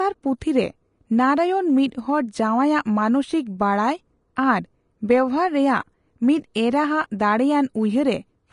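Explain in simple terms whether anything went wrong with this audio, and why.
The speech sounds hissy and grainy throughout, with nothing above 10.5 kHz, likely from Vorbis compression coarsening the fine treble detail into noise.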